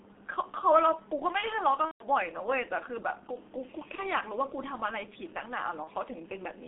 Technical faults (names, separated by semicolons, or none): G.723.1 codec; VoIP packet loss concealed by the speech codec